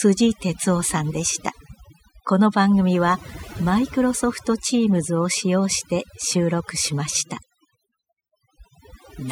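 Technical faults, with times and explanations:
Throughout, overdone noise removal: the noise reduction was pushed far too hard, so any frequency band sitting close to the estimated noise floor is pulled right down or switched off, taking the quieter parts of the speech with it. The gaps fall to near silence dotted with twinkling specks. A spectrogram shows a speckled, patchy texture with isolated flecks between phrases, and the waveform shows unnaturally flat, empty pauses.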